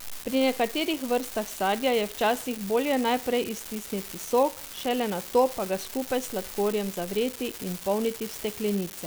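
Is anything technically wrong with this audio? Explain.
Yes, there's an unreliable data bit throughout the whole speech clip. One data line is flaky, so that bit flips at random and each error lands as a same-sized spike, about -22 dBFS. You hear it as a constant crackly fizz that carries on through the pauses.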